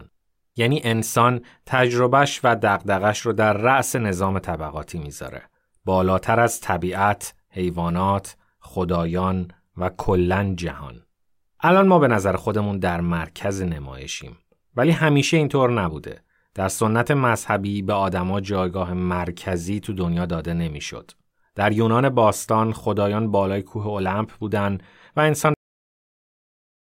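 Speech that ends with a cut-off end at 25.54 s: the sound stops mid-utterance and drops straight to digital silence for the last 1.4 s. Unlike a fade-out or a natural pause, there is no decay at all, because the final buffers were never written.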